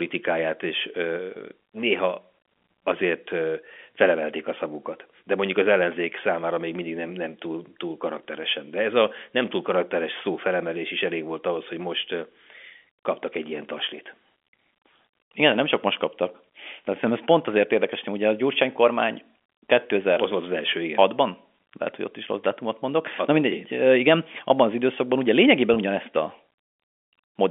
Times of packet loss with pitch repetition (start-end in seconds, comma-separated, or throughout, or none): 25.74-25.76